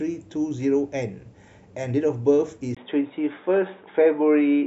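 At 2.75 s the recording input has likely switched to a poorer device, and the speech stays on that narrower path to the end. A gap of about 20 ms marks the changeover. After it, nothing above 3.8 kHz comes through, so the speech turns dull and boxy, losing its crisp sibilance. Loudness stays much the same, but a faint new background noise appears, well beneath the speech.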